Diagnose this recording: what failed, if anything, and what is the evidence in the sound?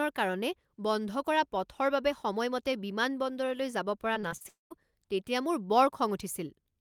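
Repeated packet loss (robotic sound), 4.13–4.46 s, right after "বাবে সময়মতে বিমানবন্দৰলৈ যাব": at the network stage, five gaps of up to 40 ms are patched by repeating prior sound, which chops the audio and makes it robotic.

Long network dropout, 4.48–4.72 s: about 0.22 s never arrives. Concealment stretches the last sound into a fading buzz, then roughly 0.14 s of silence, likely a network outage.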